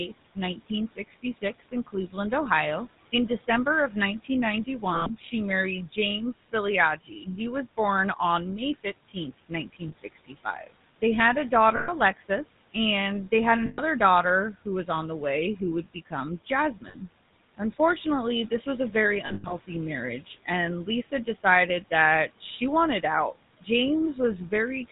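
The GSM full-rate codec colours the whole speech clip with a buzzy, gravelly roughness, consistent with the 13 kbps full-rate coder. Nothing appears above 4 kHz on a spectrogram, and harmonics look smeared and grainy because the excitation is coarsely pulsed.

From 0.08 to 7.78 s, speech is cut by the noise suppressor, which mistakes parts of it for noise. Soft consonants and word endings drop by up to about 15 dB and sound swallowed, about a second in total. The waveform shows sudden dips in the envelope, and the spectrogram shows faded patches where the room noise, about 20 dB below the speech, is also turned down.

Lost GSM frames occur at 4.94 to 5.10 s (120 ms), 9.88 s (40 ms), 11.76 to 11.91 s (120 ms), and 13.66 to 13.80 s (120 ms). Each gap is filled by repeating the last good frame, which produces a rough, metallic ring. On a spectrogram these appear as frozen, horizontally smeared bands.

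From 14.65 s to the end, the noise suppressor again cuts speech by up to about 16 dB, roughly a second in total. The dips look the same, with consonant energy and word tails thinned out.

More lost GSM frames follow at 16.88 s (60 ms) and between 19.26 and 19.53 s, where 160 ms of losses are scattered across 240 ms. The longest run in that stretch is about 100 ms, and the sound becomes a rough, metallic ring.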